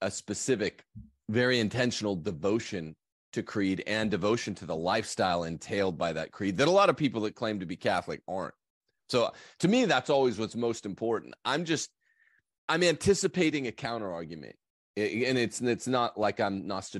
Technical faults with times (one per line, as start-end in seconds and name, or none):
16.23 block of digital silence